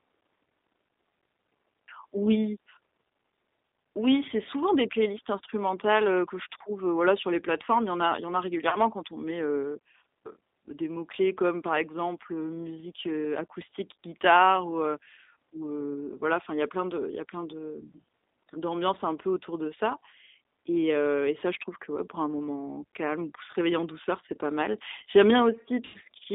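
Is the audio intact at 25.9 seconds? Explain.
No. From 25.85 to 25.98 s, VoIP packet loss concealed by the speech codec covers a gap of about 90 ms, which fits three lost packets. The decoder stretches its last pitch and filter into a buzzy tone or coloured noise that fades, and the sound stays weak briefly afterwards. Underneath, the G.729 codec limits the sound to roughly 250 Hz to 3.7 kHz and rebuilds it from a few pulses per frame, giving a plainly rough, synthetic quality.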